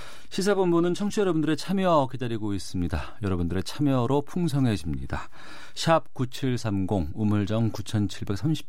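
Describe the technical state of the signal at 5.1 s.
At 5.1 s the speech carries a DC offset that runs through the entire clip: a constant of about -33 dBFS pushes the whole waveform off zero. It is inaudible as a sound, but it eats headroom and leaves steady energy at 0 Hz.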